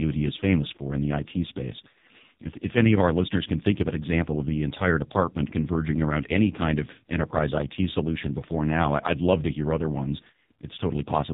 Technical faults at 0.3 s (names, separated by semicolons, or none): AMR narrowband mobile codec